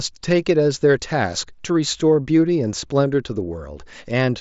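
No technical faults are audible.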